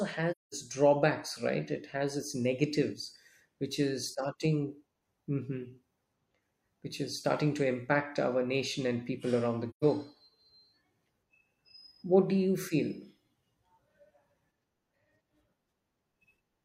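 Speech with AAC frame loss with muting: soft-faded silent gaps at 0.31–0.54 s, before "drawbacks right", and 9.70–9.84 s, after "and people around the", showing as tapered waveform holes and blank spectrogram columns.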